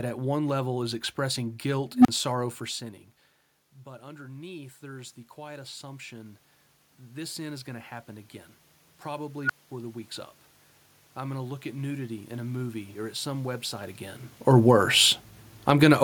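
Unstable filter faults hit this speech recording at 1.94–2.08 s and 9.44–9.71 s. A recursive filter's feedback runs away, so a tone swells and clips before the overflowing values cut out to silence: the first, a squeal around 300 Hz, builds over 107 ms and drops out for 35 ms; the second, a beep around 1.5 kHz, builds over 60 ms and leaves a 215 ms gap. Automatic gain rising runs from 3.83 to 8.37 s, where the input level falls by about 18 dB and the gain control slowly lifts its gain by about 9 dB, so voice and room noise swell together. It does so again from 11.17 to 14.29 s, by about 4 dB. These swells are separate from the natural level shifts as the talker moves near 2.5 s and 14 s. Automatic gain falling closes the clip at 15.54–15.99 s: the control pulls its gain down by about 4 dB, and the sound sinks along with its background.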